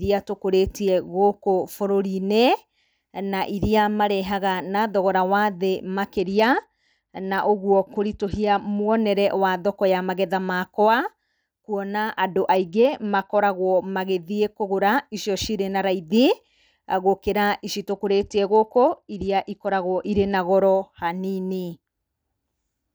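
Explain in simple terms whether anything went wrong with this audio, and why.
A Bluetooth SBC bit pool drop happened three times in this speech. The wireless link got congested, so the phone cut how much data it sent per moment to keep the sound going. High-frequency detail was dropped first and the rest was stored more crudely. The speech turns dull and muffled, with a gritty hiss, from 6.17 to 8.98 s (just before "wa thoko ya magetha"), from 12.56 to 13.43 s (between "kwona andũ" and "magĩthiĩ kũgũra icio cirĩ"), and from 17.90 to 20.37 s (after "gũkĩra ici").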